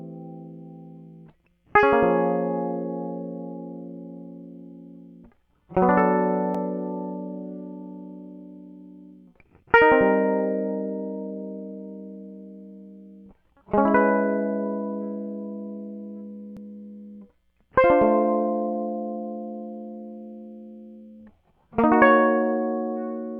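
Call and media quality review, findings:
Overlapping chunks at 6.55–6.57 s and 16.57–16.59 s, 10 s apart: about 21 ms of music replays at each chunk join, a stutter with a repeat rather than the gap of a dropout.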